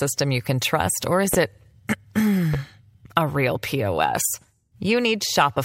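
A voltage step or pulse, likely from a plug, switch, static or driver glitch, entered this speech recording's signal path twice, causing a loud pop at 1.34–1.36 s and another at 2.54–2.57 s, about 15 dB and 10 dB above the speech, which continues underneath.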